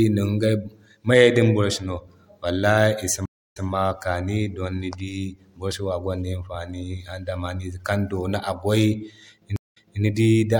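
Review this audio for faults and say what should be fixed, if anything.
Stream reconnect at 3.26–3.66 s (0.3 s silence, resuming 0.10 s earlier) and 9.56–10.02 s (0.2 s silence, resuming 0.26 s earlier). A fresh decoder restarted mid-stream after a resent burst, so audio repeats rather than simply dropping out. Buffer more and resume from the exact last-played position after reconnecting.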